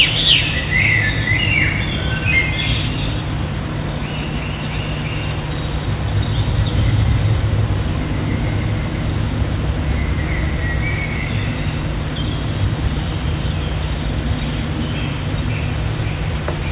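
At 2.88 s there's a skip ahead: roughly a fifth of a second of audio got dropped while later audio was already queued, so playback jumps forward almost seamlessly. Right after, from 2.97 to 3.69 s, a jitter buffer speed-up trims tiny pitch-period slices, about 70 ms in total, so things run roughly 8% fast at unchanged pitch. All of it sits on a narrowband call path with nothing above 4 kHz, which fits G.711.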